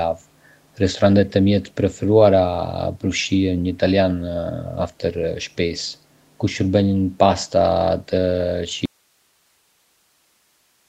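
At 1.26 to 1.33 s and again at 1.67 to 1.71 s, brief scraps of an echo leak appear. A faint copy of the speech returns about 350 ms late. It sits roughly 30 dB below the direct speech. The likely cause is a far end on a loudspeaker whose echo canceller let part of the pickup through. That leftover was sent back down the line.

At 8.86 s the speech stops abruptly. This is an audio dropout to a faint residue, and it lasts to the end. Nothing returns. Only low hiss fills the gap, around 45 dB below the signal. The cut is sudden, not a pause or a fade. The signal was most likely lost while the path after the break stayed open. The call coding audible throughout, with nothing above 8 kHz, fits Opus at about 32 kbps.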